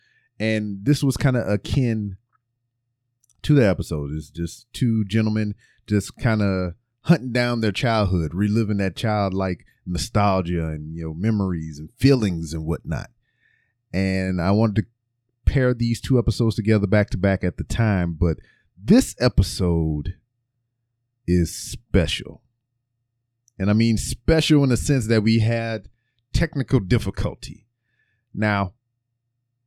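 No technical faults can be heard anywhere in the recording.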